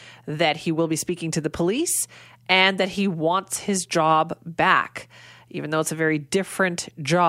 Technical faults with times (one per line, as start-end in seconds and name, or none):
none